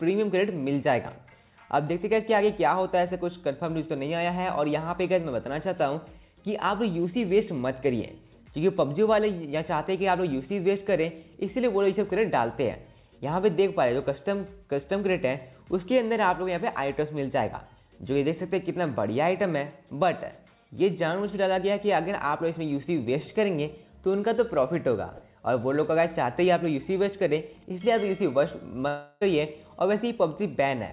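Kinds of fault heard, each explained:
Long network dropout: from 28.88 to 29.23 s the sound turns into a fading buzz stretched from the last moment and never drops to silence, then resumes further on. Likely cause: about 340 ms of audio never arrived, and the receiver filled the gap by extending what came before.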